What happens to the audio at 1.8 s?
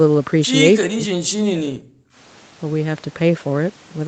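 At 1.8 s the speech is near the end of a stretch of suppression running from 0.76 to 2.03 s, in which the level falls away, at its deepest by around 40 dB, for roughly a second in total. The pattern points to speech suppressed in double talk: the echo canceller likely could not tell this talker from loudspeaker echo while the far side was speaking, so it attenuated both. The speech sounds dipped, dulled or cut out in pieces.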